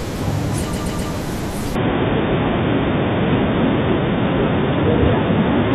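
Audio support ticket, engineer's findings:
Repeated frames, 0.72–1.11 s. Stutter: the same 128 ms block plays three extra times, adding 384 ms, consistent with a run of about six compressed frames duplicated in the write or transport path.

Input switched to a poorer device, 1.75 s to end. No gap at the switch. Abrupt band-limiting with nothing above 3.6 kHz, level shift of about 5 dB, new noise floor around 45 dB below signal. Likely cause: capture moved to a narrower-band microphone or headset call profile.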